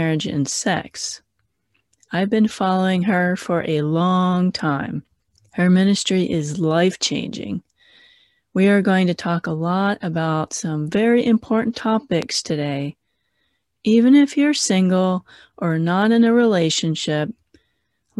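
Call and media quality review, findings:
Loud pop at 12.22–12.24 s, right after "about some very important". One sharp pop, roughly 10 dB above the speech, which keeps going underneath. Likely a voltage spike from a plug, switch, static or driver glitch, shaped into a click by the circuitry after it.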